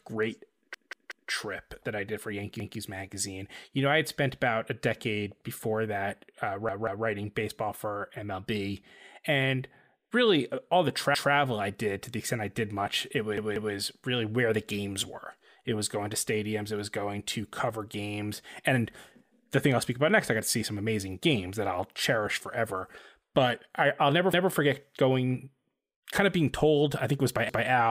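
A stuttering repeat first appears at 0.74 s and runs to 1.30 s, just before "that I did for": the same chunk of speech about 186 ms long plays three extra times with hard joins. This is a repeated buffer. New audio arrived late, so playback looped the last block, a length that fits an 8192-sample buffer. Single repeats of one block follow at 2.60 s.

At 6.48 s a lone sharp click sits in the speech, too brief to remove anything audible. It was likely caused by dropped samples, with roughly one sample missing so that the waveform jumps straight to a later value.

The repeated-buffer stutter returns at 6.69 to 7.06 s, where the block sounds twice more. There are single repeats at 11.15 s, and a doubled repeat runs from 13.38 to 13.75 s between "I did much it" and "really where the games". Further single repeats come at 24.33 s and at 27.49 s, after "think it was by".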